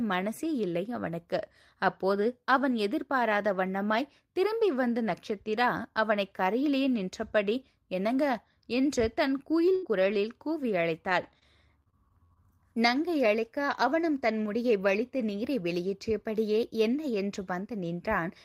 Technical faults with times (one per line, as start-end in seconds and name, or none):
9.75-9.85 burst of packet loss
9.85-10.31 lost packet rebuilt from error correction
11.09-12.37 repeated packet loss (robotic sound)